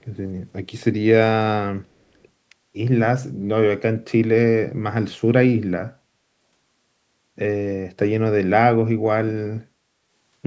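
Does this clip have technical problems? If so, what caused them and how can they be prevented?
Yes. From 0.01 to 0.06 s there is a very faint delayed copy of the speech, about 0.36 s behind. This is likely an echo leak: the far end's echo canceller let loudspeaker pickup through. Using a headset or better acoustic echo cancellation would prevent it.

The speech dips at 6.03–6.28 s (a clear drop) and 9.7–10.1 s (a slight drop). This is likely speech suppressed in double talk: with both sides talking, the canceller attenuated the near talker along with the echo. Full-duplex-capable echo cancellation or headsets would prevent this.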